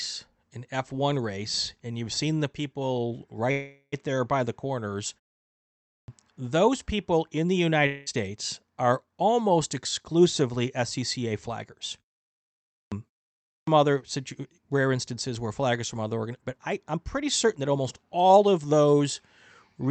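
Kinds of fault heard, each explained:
Call audio freeze: At 3.51 to 3.94 s the sound stalls for about 0.41 s. The last sound is stretched into a fading buzz, ending in brief silence. Then the speech resumes where it stopped, with nothing lost. Likely delayed packets emptied the jitter buffer.
Clipped start after a pause: The playback device seems to sleep during silence and wake too slowly. After pauses of 0.67, 0.65 and 0.34 s, speech at 5.78, 12.60 and 13.36 s begins abruptly. Each time about 0.3 s of its start is missing.
Long network dropout: From 7.86 to 8.08 s, about 0.2 s of speech never plays. The last sound carries on as a fading buzz instead. The speech then returns further along, without the lost part. Likely no packets arrived for that stretch.
Jitter buffer speed-up: The receiver held too much buffered audio. It trimmed short pitch-length pieces repeatedly to catch up. From 10.11 to 11.49 s the speech runs 6% fast, losing about a tenth of a second. 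From 16.58 to 19.01 s it runs 12% fast, losing roughly 0.3 s.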